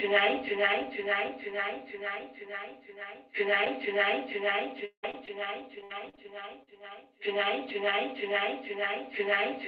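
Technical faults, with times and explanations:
3.65 s, lost packet rebuilt from error correction: a lost 20 ms packet was replayed from the low-bitrate copy in the next packet, so there is no gap, just a briefly rougher, noisier patch.
4.85 to 6.69 s, repeated packet loss (robotic sound): packets kept dropping, leaving eight holes patched by stretching the preceding sound. The result is choppy audio with missing pieces, the longest about 0.17 s.
7.69 s and 7.91 s, lost packet rebuilt from error correction: two separate 20 ms packets were lost and rebuilt from their redundant copies, giving two short grainy, noisier moments with no dropout.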